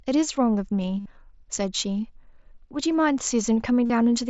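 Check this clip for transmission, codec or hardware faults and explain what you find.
Two runs of concealed Bluetooth headset packet loss affect this speech. At 1.00 s for 60 ms and at 3.85 s for 45 ms, headset packets were lost. The receiver repeated recent waveform, giving a buzzy held tone and a slight warble on recovery. The mSBC headset codec limits the band to 8 kHz.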